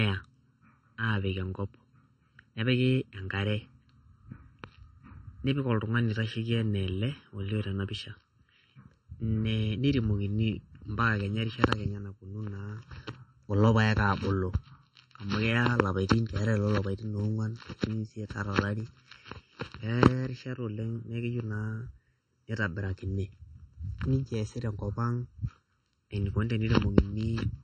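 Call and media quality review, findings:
Channel delay (comb filtering), throughout: hollow, phasey speech with fixed notches, the first around 700 Hz and further notches evenly spaced above it. Probable component: mono downmix. One channel lags by roughly 0.7 ms before summing, so shared content cancels at those frequencies.

MP3 compression, throughout: plainly audible codec damage, with watery, swirly texture, smeared consonant attacks and nothing above 8.9 kHz. Likely cause is a low-bitrate MP3 encode, which fits 32 kbps. The encoder zeroes weak spectral lines frame to frame and applies a fixed treble cutoff.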